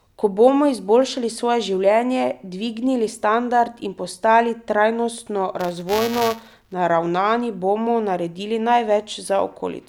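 From 5.59 to 6.73 s, after "standard in postali trajnostno", buffer tearing produces a steady 345 Hz robotic buzz, which fits a 128-sample buffer, as slightly older audio is spliced into each period. Unlike random crackle, it is regular.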